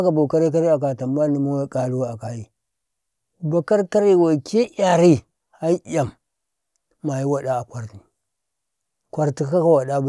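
No technical faults can be heard anywhere in this recording.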